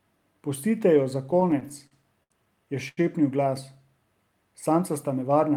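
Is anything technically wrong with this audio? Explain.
Yes. From 1.31 to 2.32 s, just after "jo za", the speech stutters through repeated stalls. Late packets kept draining the jitter buffer, so sounds are held up to 72 ms. It drags rather than dropping anything.

From 2.88 to 2.99 s, a short stall from a late packet holds one sound for 89 ms, then resumes from the same place. It is a single stretch, not a stutter.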